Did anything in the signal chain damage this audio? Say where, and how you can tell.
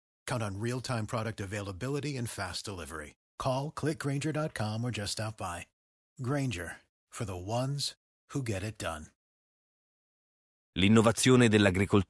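No, nothing in the chain audibly damaged this speech.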